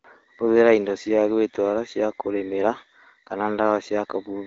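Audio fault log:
Nothing to flag here, just speech carried over AMR wideband (HD Voice) at about 15.85 kbit/s, with the usual quiet top end above roughly 7.6 kHz.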